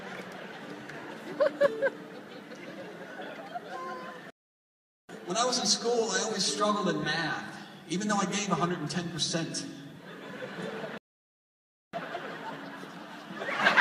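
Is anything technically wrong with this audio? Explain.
Yes. There are two playback stalls, at 4.30 to 5.09 s and 10.98 to 11.93 s. The sound cuts out mid-flow for about 0.79 s, then 0.96 s, before resuming. The player likely ran short of data or was blocked.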